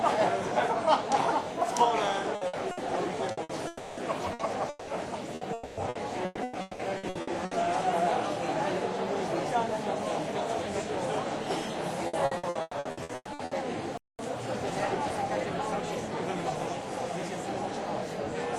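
From 2.35 to 3.52 s there is repeated packet loss (robotic sound): five gaps, the longest 60 ms, totalling 300 ms and about 26% of the span. Each hole was patched by extending the previous sound, so the audio turns choppy, with pieces missing.

From 3.67 to 4.00 s a 300 ms stretch is bridged by a continuation of the last sound, with no silence left before the audio returns further on, most likely a long network dropout.

Repeated packet loss returns from 4.33 to 7.54 s: eleven gaps covering 1020 ms, about 32% of the span, the longest 180 ms. Inside it, from 5.53 to 5.80 s, a further 240 ms is filled the same way, likely another long network dropout, again without silence.

From 12.07 to 13.54 s comes a third burst of repeated packet loss, with eleven gaps filling 780 ms, the longest 120 ms, concealing about 53% of the span, the densest of the three.

From 13.98 to 14.19 s the output drops out for 214 ms, the sound stopping in mid-flow before carrying on, likely a playback stall, from the player running short of data or its thread being blocked.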